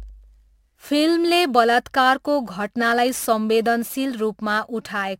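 From start to finish the speech carries a crude rate conversion artefact, which fits a 48 kHz to 44.1 kHz change done by nearest-sample picking, with samples simply dropped and no filtering. The timing error recurs in a fixed pattern set by the two rates, creating shifted, inharmonic copies of the speech, sitting roughly 25 dB below it. It is heard as a gritty fizz that rides on louder and brighter syllables.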